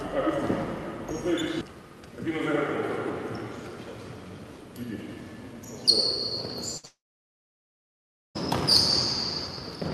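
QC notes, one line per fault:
6.77 to 6.85 s, burst of packet loss: a gap of about 60 ms where the receiver held the last sound, as a buzz or hiss depending on what preceded it, and faded it across the 59 ms it had to fill. About 60 ms of the original audio never plays, leaving a small jump in continuity.
6.85 to 8.37 s, long network dropout: sound stops for about 1.5 s. A short tail of continued sound fades out, then roughly 1.4 s of silence follows before audio returns at 8.37 s. The cause is likely an extended interruption in packet delivery, with the receiver extending the last sound until it decayed to nothing. About 1.5 s of material is absent, so the audio resumes past the missing section rather than where it stopped.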